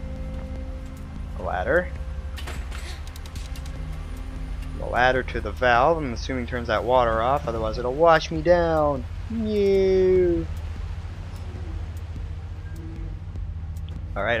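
Nothing here calls for comment: the audio runs its whole course without a single dropout, glitch or stray noise to point at.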